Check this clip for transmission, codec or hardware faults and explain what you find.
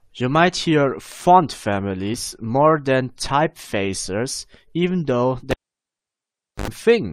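Two faults are present, one at the stream level and one in the analogue hardware.

At 2.14 s there is an overlap between stream segments. Two adjacent segments claimed the same stretch of time, and the player discarded the overlap even though the audio there wasn't duplicated. A few milliseconds of speech are lost and the waveform steps, giving a tiny skip. The timing fits a 2-second segment boundary.

From 5.51 to 6.68 s the cable is pulled and plugged in again. A pop marks the disconnection, followed by roughly 1.1 s of near silence. A brief 77 ms burst of 50 Hz mains buzz comes as the plug's tip makes contact before seating fully. A second pop follows as the signal returns.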